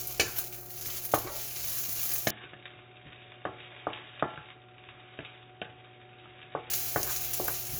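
At 2.31 s the audio abruptly turns dull and boxy, with nothing above 3.8 kHz, a drop in level of roughly 10 dB, and new background noise sitting about 30 dB below the signal. There is no gap at the change. At 6.70 s the full, brighter sound returns just as suddenly. This is likely an input switched to a poorer device, with the recording taken from a narrower-band microphone or headset path that has its own tone and noise.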